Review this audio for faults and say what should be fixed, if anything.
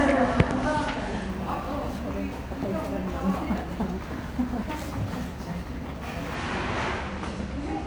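Imaging from sample-and-hold upsampling runs from 1.29 to 6.35 s. Samples were repeated without smoothing. Mirror images fill 11 kHz to 22 kHz, about 27 dB down, as metallic fizz.

Prevent it by upsampling with a proper interpolating low-pass filter instead of sample repetition.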